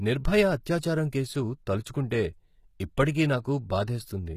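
From start to end, the treble of this speech has a synthetic, gritty sheen. The s sounds come out lispy and metallic, and nothing at all sits above about 14.9 kHz. The damage is plainly audible throughout. The likely cause is HE-AAC compression at a low rate, which fits roughly 20 kbps. The codec keeps only the lower spectrum and fills in the highs by copying lower bands upward under a coarse envelope, so the rebuilt treble's harmonics fail to line up with the real ones.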